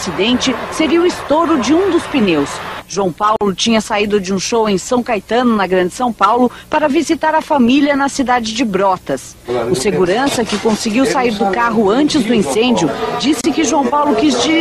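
A gap at a join of encoded pieces opens at 3.36 s, lasting about 49 ms, and returns at 13.41 s for about 31 ms, ten seconds apart. Each section was encoded separately and spliced without trimming, so the encoder's start-up delay and the padding on its final frame remain as dead air. The sound drops out abruptly, with edges softened by the codec, then resumes exactly where it stopped.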